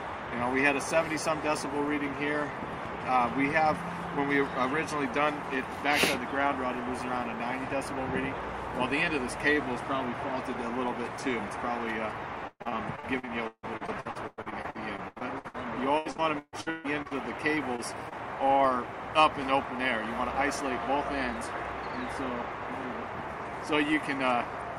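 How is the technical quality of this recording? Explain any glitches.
The recording has clear technical problems: a constant low buzz throughout, two stretches of choppy robotic sound, and three brief dropouts just after them.

Filter restarted on every block: from start to finish a faint tick repeats at about 23.4 Hz, merging into a low buzz that grows louder and softer with the audio. The filter is losing its memory at each block boundary, so every block starts from silence with a small click. The rate fits blocks of 2048 samples at 48 kHz. It differs from packet loss because it is perfectly regular and nothing is missing.

Repeated packet loss (robotic sound): from 12.47 to 15.56 s and again from 15.98 to 17.13 s, the audio turns choppy, with pieces missing. Data kept arriving late or not at all, and each hole was patched by stretching the last sound before the next hole came. The first stretch has 22 gaps, with about a third of it synthesised and the longest gap 157 ms. 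The second has 8 gaps and is nearly half concealed. The broken, irregular texture distinguishes this from the steady block buzz.

Short concealed packet loss: at 17.55, 17.76 and 18.09 s, single isolated gaps of about 20 ms were filled by continuing the previous sound and blending back. Each is heard as a tiny smear or wobble rather than a stretch of garbling. Being isolated and brief is what separates these from the robotic passages just before.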